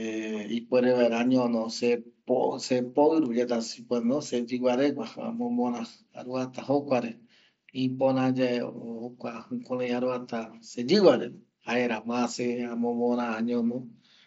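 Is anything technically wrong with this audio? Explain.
No, nothing technically wrong stood out on listening to this speech clip.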